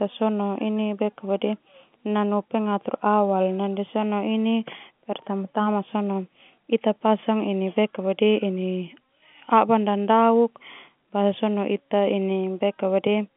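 No technical faults are audible.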